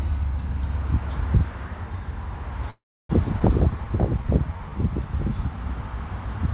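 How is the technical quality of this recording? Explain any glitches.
The recording is band-limited, with nothing above 4 kHz, which points to a narrowband call codec such as G.711 mu-law. It also has three glitches close together.

From 2.7 to 3.11 s there is a call audio freeze. The sound trails off into about 0.32 s of silence, then resumes where it stopped. This was likely caused by packets stalling until the jitter buffer emptied.

At 3.39 to 3.42 s the audio skips ahead. It jumps forward almost seamlessly, losing about a tenth of a second, because a stretch was dropped while later audio was already queued.

From 3.71 to 4.71 s comes a jitter buffer slow-down. The sound drags at 91% speed with unchanged pitch, as single pitch periods are repeated to add 100 ms of reserve.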